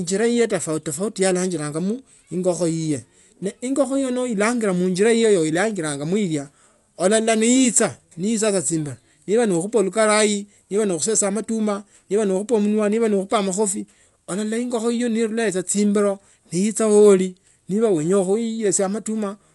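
Speech throughout sounds dull and rough, likely from Dolby Digital compression at about 64 kbps; a spectrogram shows nothing above 11.4 kHz and speckled, noise-filled gaps between harmonics.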